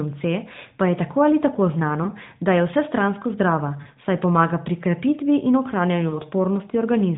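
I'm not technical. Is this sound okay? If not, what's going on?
No, there are three short hiccups called lost AMR speech frames: bits of the phone signal got corrupted, so the decoder briefly stretched and faded the previous sound, at 2.04–2.10 s after "tako ali tako znano", 3.82–3.89 s before "saj pomaga pri krepitvi", and 6.10–6.21 s after "pomaga pri krepitvi in".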